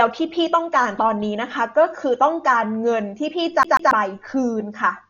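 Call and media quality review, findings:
Speech throughout: dull, band-limited, nothing above 7 kHz, rough fluttering noise around voiced tones. Likely heavy Dolby Digital compression, starved mantissa lines filled with dither noise, fitting roughly 40 kbps. Unlike plain low-pass filtering, the flutter sits inside the band.

3.63–3.91 s: fast, even stutter, a 140 ms slice played again twice with brief mutes at each jump. CD stuck on one turn, laser thrown back one track per revolution. Loop length stays fixed, unlike irregular network dropout repeats.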